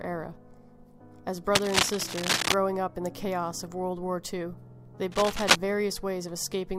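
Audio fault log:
1.54–2.54 s and 5.11–5.56 s, cable scratch noise: two bursts of dense, uneven crackle sit on top of the sound, the first lasting about a second and the second just under half a second, both running a few dB louder than the audio itself. That scratchy, rustling texture likely comes from a worn cable, connector or control carrying DC being moved, so its contact resistance jitters rapidly and feeds ragged noise into the signal while it's disturbed.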